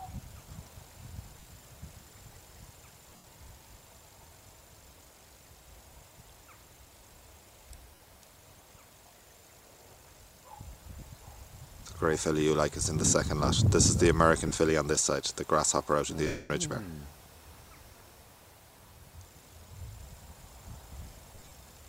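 Lost LE Audio frames: the Bluetooth LE Audio link dropped frames and the LC3 decoder filled each gap by repeating the last spectrum with randomised signs, fading it as the gap lengthened. This smears tonal content into brief noisy hiss at 1.40 s (50 ms), 3.10 s (scattered over 140 ms, longest run around 70 ms), 7.95 s (50 ms), 11.00 s (20 ms), 14.48 s (30 ms), 16.27 s (230 ms, dying away toward silence) and 21.35 s (scattered over 160 ms).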